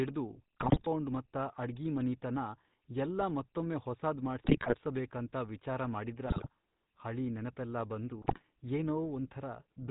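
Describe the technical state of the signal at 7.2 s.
At 7.2 s you're hearing the GSM full-rate codec, same as across the whole clip. It models the vocal tract and drives it with a thinned-out pulse excitation, so the speech comes through buzzy and gravelly, cut off above 4 kHz, with damage that fits a rate around 13 kbps.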